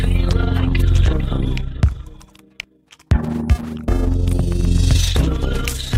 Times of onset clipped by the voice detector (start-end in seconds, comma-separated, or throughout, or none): none